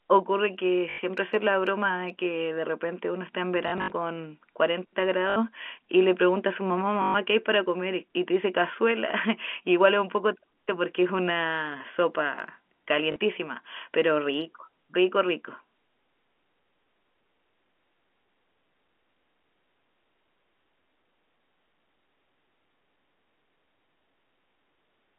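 Packet loss with the last packet repeated occurs at 0.9 to 0.98 s, 3.68 to 3.92 s (140 ms lost in scattered runs), 5.3 to 5.36 s, 7.02 to 7.14 s and 13.12 to 13.16 s. Each gap is filled by replaying the previous packet out of step with the pitch, so longer runs buzz near 50 Hz, which fits 20 ms packets. It sounds like a brief robotic stutter over the telephone-band speech.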